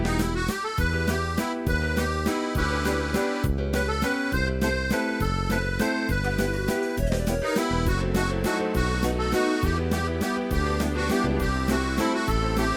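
Nothing goes wrong at any point here, so there's no technical fault to pin to any moment in the clip.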